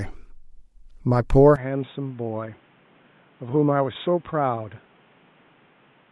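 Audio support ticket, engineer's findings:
Input likely switched to a poorer device at 1.56 s, no gap at the switch. Speech from there to the end is band-limited, nothing above 3.8 kHz, so it sounds dull and boxy. The level drops around 10 dB, with a new noise floor roughly 30 dB down.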